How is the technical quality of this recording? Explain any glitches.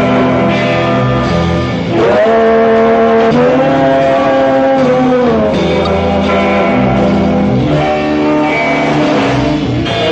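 The recording has three brief glitches caused by damaged data in a compressed stream. They occur from 3.30 to 3.32 s, at 5.85 s, and at 9.85 s. Each is a tiny blip or chirp lasting about 20 ms or less. Part of the compressed data was corrupted at these points. The decoder could not read the affected frames properly and lost sync. It then searched for the next valid frame header. Each resync interrupts the sound for a split second.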